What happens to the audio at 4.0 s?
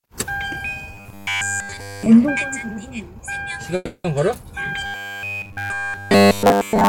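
A call audio freeze runs from 3.75 to 4.06 s, likely from packets delayed until the jitter buffer emptied. About 290 ms is filled by a fading buzz or hiss that continues the last sound and ends in 50 ms of silence. On a spectrogram it shows as a smeared, decaying band ending in a blank strip. The sound then resumes intact, about 290 ms late.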